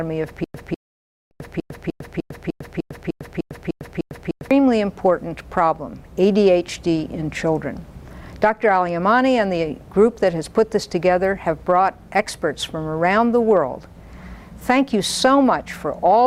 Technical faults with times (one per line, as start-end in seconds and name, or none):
0.44-4.51 stutter with silent gaps
0.75-1.31 rebuffering stall